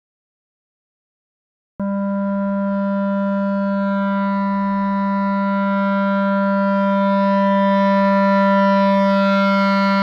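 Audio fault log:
0.0–1.80 s, cut-off start: pure digital silence, then sound enters mid-event at 1.80 s with no attack or fade-in, unlike a dropout, which interrupts audio already playing.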